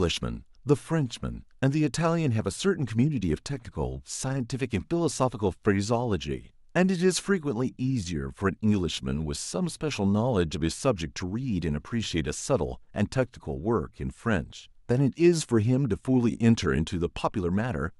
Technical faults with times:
none

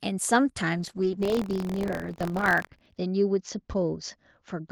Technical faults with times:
0.78-4.72 call bitrate drop
1.21-2.97 buffer tearing

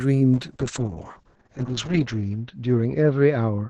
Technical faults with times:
0.35-3.69 call bitrate drop

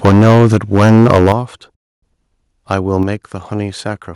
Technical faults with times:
0.05-1.32 microphone overload
0.09 microphone volume stepped down
1.32 microphone volume stepped down
1.74-2.03 playback stall
3.03 microphone volume stepped down

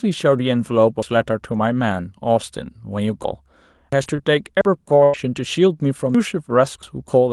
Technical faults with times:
1.02 dropped buffer (overrun)
3.93 dropped buffer (overrun)
4.03-4.21 short concealed packet loss
4.06-4.20 lost packet rebuilt from error correction
4.61 dropped buffer (overrun)
5.04-5.16 burst of packet loss
5.13-5.15 lost packet rebuilt from error correction
6.15 dropped buffer (overrun)

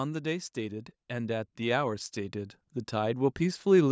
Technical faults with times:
0.54-3.91 automatic gain rising

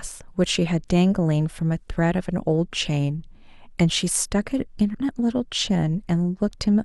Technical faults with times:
4.94 stream segment skipped

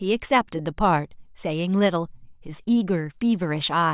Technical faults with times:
none

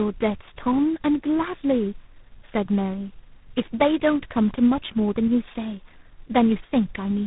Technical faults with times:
0.00-7.27 tandem speech coding

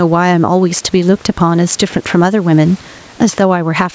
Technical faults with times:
0.00-3.94 gain pumping

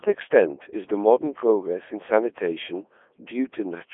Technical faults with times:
0.00-3.93 Codec 2 vocoder

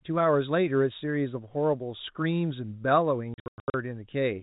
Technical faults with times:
3.34-3.74 packet loss filled with silence

